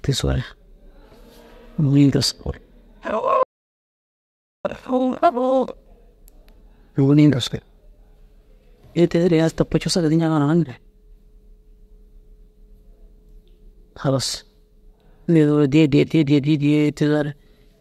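At 3.43 s, an audio dropout to silence. The speech stops dead until 4.65 s, with no room tone. The input was likely lost.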